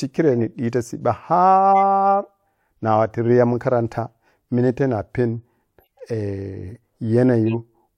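Corrupt frames are decoded at 0.38–0.40 s, just before "ɓita cibba", at 1.71–1.78 s, at 5.80–6.01 s after "minate nigha panu", and at 7.46–7.54 s. Flipped bits misplace spectral energy, giving brief chirps and noise bursts that peak near −10 dBFS in the last one.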